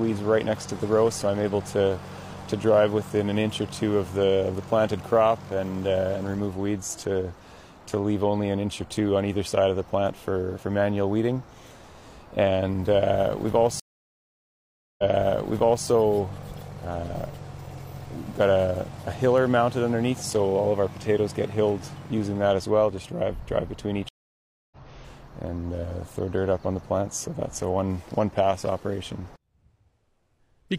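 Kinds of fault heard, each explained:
Stream reconnect: the connection dropped, playback went silent, and a new decoder started partway into the stream. At 13.80 s the audio cuts out for 1.19 s, then resumes 0.88 s earlier than where it stopped, so a stretch of sound is heard twice because the server resent a burst. At 24.09 s a 0.63 s gap is followed by a resume about half a second later, skipping ahead as on a live stream.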